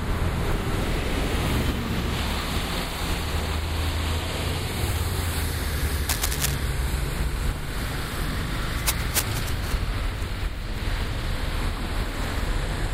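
Cable scratch noise runs from 6.09 to 6.54 s: dense, uneven rustling bursts sit just below the level of the sound. This is likely a worn cable, connector or control being moved, its contact resistance flickering. It returns from 8.69 to 9.73 s.

A dropped buffer (overrun) at 8.42 s gives a small forward jump, losing about 15 ms. The samples were likely overwritten before the software collected them, so the edges were spliced together. A second, shorter skip of about 5 ms comes at 9.39 s, inside the scratching.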